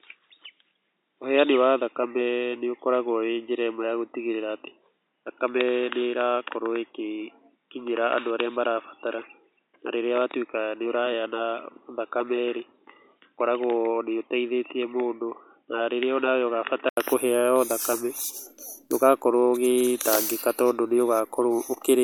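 The input was likely routed through a poorer device, such as a headset call profile, from the start until 16.97 s, so this speech is band-limited to 3.8 kHz, dull and boxy, somewhat quieter, with faint added noise, before an 80 ms gap and a clearer sound.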